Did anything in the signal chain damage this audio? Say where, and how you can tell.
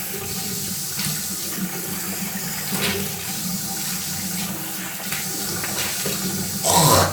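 No, no fault is audible.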